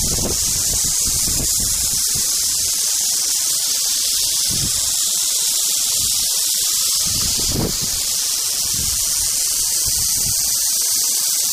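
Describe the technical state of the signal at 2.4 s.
At 2.4 s, as across the whole clip, grainy distortion follows the signal, likely low bit depth without dither: rounding to about 4 bits leaves error roughly 10 dB below the signal. Unlike dithered hiss, it rises and falls with the sound.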